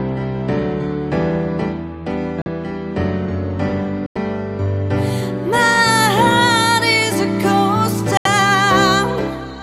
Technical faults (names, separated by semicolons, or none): Bluetooth stall